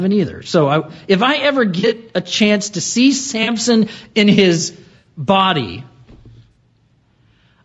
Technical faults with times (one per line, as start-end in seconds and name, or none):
0.00-7.65 gain pumping
0.00-7.65 low-delay AAC compression
1.79-1.97 AAC frame loss with concealment
3.43-3.49 AAC frame loss with concealment
4.97-5.07 AAC frame loss with concealment
6.52-6.56 AAC frame loss with concealment